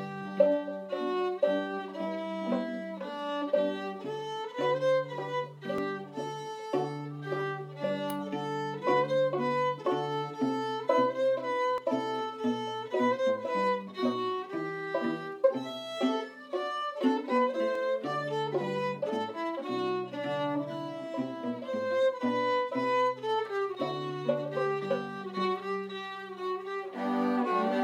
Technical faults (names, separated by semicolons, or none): overlap between stream segments